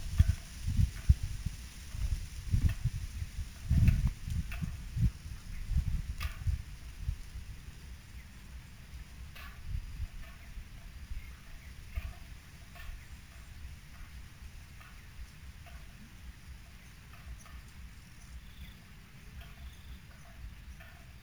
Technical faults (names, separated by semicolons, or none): imaging from sample-and-hold upsampling